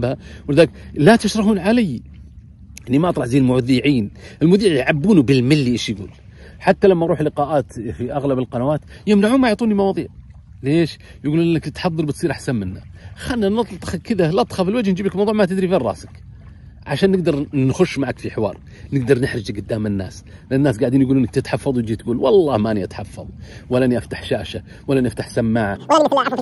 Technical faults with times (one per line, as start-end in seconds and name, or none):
25.76-26.41 wrong sample rate